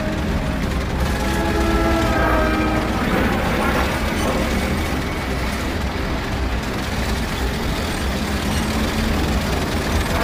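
No dropouts, clicks, distortion, level jumps or timing problems turn up anywhere in the recording.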